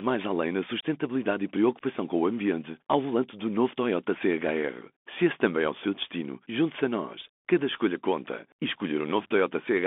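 Throughout the speech, the sound is boxed into a thin telephone band, roughly 200 Hz to 3.5 kHz, with scratchy s sounds, a gritty granular hiss beneath, and harsh distortion on loud, bright moments. This is the Bluetooth CVSD headset codec: one-bit up-or-down steps whose adaptive size can't keep pace with fast, loud high-frequency movement.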